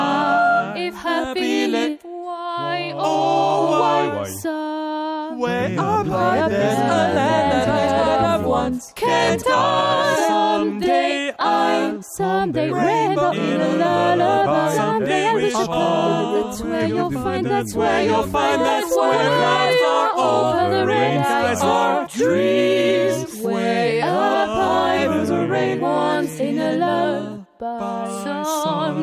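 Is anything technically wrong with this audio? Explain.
No, nothing technically wrong can be heard in this audio, and the signal holds steady throughout with no audible defects.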